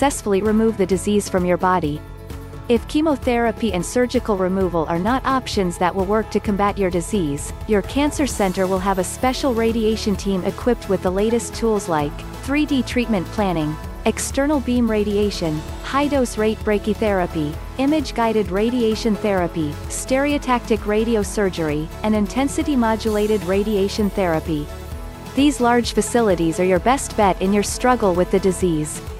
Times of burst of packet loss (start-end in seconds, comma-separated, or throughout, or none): none